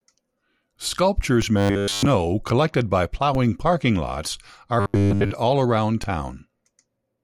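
Speech with two kinds of fault. DC steps at 1.42 s, 3.35 s (between "collected by" and "parking lots are") and 6.04 s (after "all around") give low thumps as the zero line jumps, then the offset decays away through a 20 Hz high-pass. Robotic sound from repeated short buffers appears from 1.57 to 2.06 s, and from 4.80 to 5.32 s (between "parking lots are" and "all around"). Both stretches carry a metallic 100 Hz buzz, which fits a 10 ms buffer being replayed. The likely cause is audio arriving too seldom. The first stretch is entirely repeats. The second is mostly repeats.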